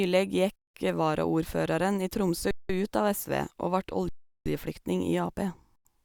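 At 0.56–0.74 s, 2.51–2.69 s, 4.09–4.46 s and 5.76–5.85 s the speech freezes silently: an underrun with a held sample, the converter holding its last value until data resumed. On a waveform, flat lines; on a spectrogram, blank gaps.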